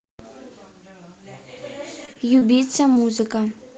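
Short concealed packet loss appears at 2.05, 2.13, 2.39 and 2.93 s. Each time about 20 ms of audio failed to arrive, and the receiver covered the gap by extending the preceding sound before blending back into the real signal. Each event is a brief smear or wobble in the speech. A plain dropout would leave a hard gap of silence or a click, but here the hole is filled with continued sound, so nothing goes abruptly quiet.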